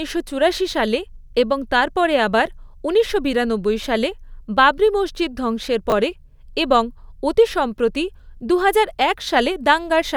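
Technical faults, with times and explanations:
5.90–5.92 s, chunks out of order: after "সালে বাবরি মসজিদ ধ্বংসের", a brief jumbled flicker appears just before "পরে এবং অতি সম্প্রতি". One 10 ms chunk plays one chunk late, so nothing is missing but the sequence is swapped, leaving three hard joins.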